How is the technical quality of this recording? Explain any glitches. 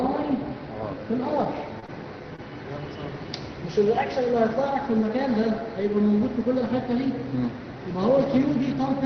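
The recording has two kinds of brief network glitch, all within about one second. It passed through a call codec whose top end stops near 6 kHz, which fits Opus at a low bitrate around 20 kbps.

Lost packet rebuilt from error correction, at 1.44 s: one packet never arrived, but the following packet carried a low-bitrate backup copy, and the decoder played that instead. The 20 ms patch leaves no gap but sounds momentarily rougher and noisier.

Short concealed packet loss, at 1.80 s, 1.86 s and 2.36 s: each time about 20 ms of audio arrived too late, with no backup. The receiver extended the preceding sound to bridge each hole before fading back in, so each spot is a brief smear or wobble.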